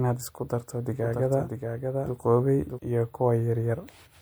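Speech clip with a doubled audio track from 1.0 s to 2.8 s, starting just after "isku darto". A second full-band copy of the speech runs around 0.7 s behind the original at about 5 dB lower. It is dry, with no decay or room colour, and cuts in and out abruptly at both ends. The cause is likely the same signal being captured a second time through a slower path, or an edit leaving two copies overlapping out of step.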